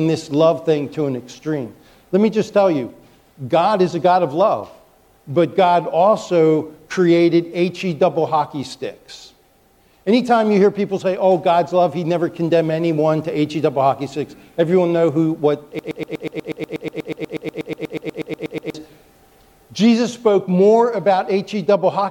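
A broken-record loop runs from 15.79 to 18.74 s: a 121 ms fragment repeats exactly, back to back, about two dozen times, giving a rapid mechanical stutter. The likely cause is a stalled player, encoder or stream resending its last buffer, so the audio belonging there is lost.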